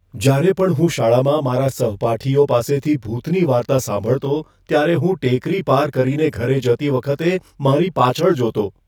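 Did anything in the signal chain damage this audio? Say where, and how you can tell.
Yes, channel delay (comb filtering) throughout the speech. One channel lags by roughly 20 ms, likely a buffer offset, before mono summing. Evenly spaced notches from very low frequencies make it sound rough or slightly doubled.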